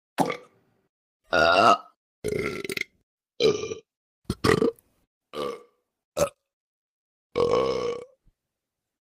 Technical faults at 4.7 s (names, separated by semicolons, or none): none